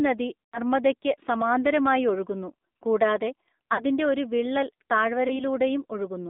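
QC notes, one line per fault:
throughout, AMR narrowband mobile codec: The signal passed through the AMR-NB mobile speech codec at a low mode, consistent with about 7.4 kbit/s, and the line only carries roughly 200 Hz to 3.7 kHz. Everything above that band is missing, so the speech sounds thin and boxed-in. Because the codec rebuilds the voice from a vocal-tract model excited by sparse pulses, the speech has a plainly audible buzzy, synthetic edge.
0.46 to 0.58 s, 3.74 to 3.84 s (after "സമാന്തരമായി ഒഴുകുന്നു കൂടാതെ", before "ഒരു വിള്ളൽ"), 5.28 to 5.44 s (after "ഒരു വിള്ളൽ"), lost AMR speech frames: Speech frames failed their checksum, so the decoder filled the gaps by repeating the last good pitch and spectral settings at falling gain. The gaps are about 80 ms, 40 ms and 20 ms long, which fits runs of four, two and one 20 ms frames. The first, longest gap is heard as a drawn-out, fading smear. 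The second is also drawn out and fading, the last is a brief dip or warble, and the speech returns weak or rough for a moment after each.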